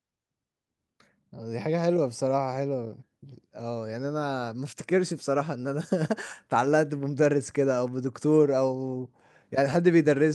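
No technical faults are audible.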